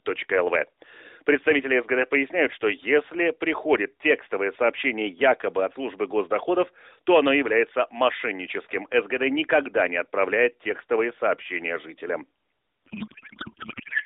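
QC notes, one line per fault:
12.86–14.05 s, codec payload misread: right after "отправляет текстовые сообщения жителям", the narrowband AMR speech gives way to garbled warbling noise that barely tracks the talker and runs to the end. This fits octet-aligned AMR being decoded as bandwidth-efficient, so every frame's fields land in the wrong places. Unlike packet loss, there are no gaps or concealment fades, just continuous, wrongly decoded sound.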